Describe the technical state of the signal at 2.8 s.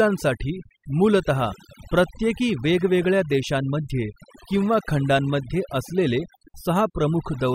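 At 2.8 s the speech carries overdone noise removal, present from start to finish. The noise reducer is cutting individual frequency bands hard wherever they sit near its noise estimate, taking quiet speech detail too, so gaps fill with twinkling specks over near silence.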